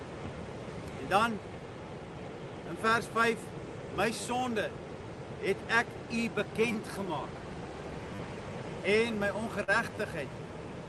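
Audio carried over a call path, with its top end stopping near 12 kHz as a call codec would leave it, shows four repeated-buffer stutters at 4.21–4.24, 6.72–6.75, 8.15–8.19 and 9.95–9.97 s. At each one, new audio arrived late and the device replayed its last block two to four extra times. The hard joins fit a 10 ms buffer and produce a short buzzy stutter, with essentially nothing lost. At 9.63–9.70 s there is a short concealed packet loss: about 40 ms never reached the decoder, so the receiver extended the preceding sound to fill the gap before blending back in, leaving a brief smear.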